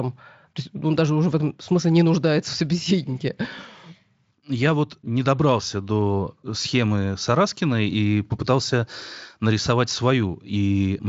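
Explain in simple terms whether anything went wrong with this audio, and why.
Nothing went wrong with this speech recording. It has passed through the Speex voice codec used in older internet calls and game chat, and any trace that process leaves on the sound is faint at most.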